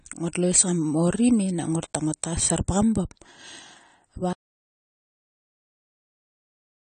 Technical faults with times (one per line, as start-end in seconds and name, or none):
0.00-6.86 AAC compression
4.33-6.86 audio dropout to silence